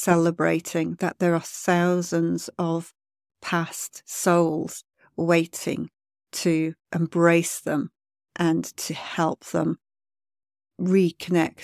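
Nothing in the speech stood out as a technical problem on listening.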